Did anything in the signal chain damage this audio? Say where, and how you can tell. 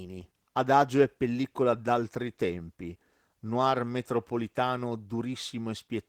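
Yes, at the codec: Opus voice compression throughout. The speech sounds hoarse and slightly robotic, which fits about 16 kbps in hybrid mode, with coarse linear prediction below 8 kHz plus a thin transform layer above. A spectrogram shows patchy energy above 8 kHz in 20 ms blocks.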